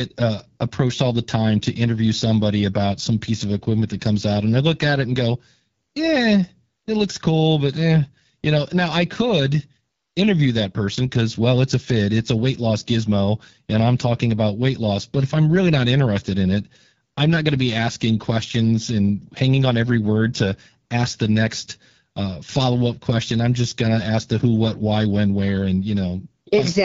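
Speech clip, and the whole thing's been through the AMR wideband (HD Voice) codec at a low rate, sounding like 8.85 kbit/s, so the codec damage is plainly audible throughout.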